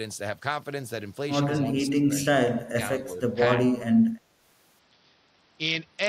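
It's a short speech clip, and in three spots the talker gets pushed down: from 1.58 to 2.1 s there's a dip of around 15 dB, then a brief, deeper cut of about 20 dB between 2.72 and 2.79 s, and a milder sag of roughly 5 dB from 3.02 to 3.2 s. That pattern most likely comes from speech suppressed in double talk. The echo canceller couldn't tell this side's voice apart from the far end's echo while both were talking, so it ducked everything. Then from 4.79 s to the end the sound turns dull and gritty, with the top end thinning out and grainy noise sitting on the speech. That's a Bluetooth SBC bit pool drop. The link got congested, and the dulling fits the bit pool falling from 31 to 7, around 61 kbps. With that few bits the highest sub-bands get starved and the rest are quantised coarsely, and it never recovers before the clip ends.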